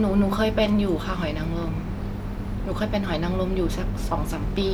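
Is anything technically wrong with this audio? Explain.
No, no technical faults heard.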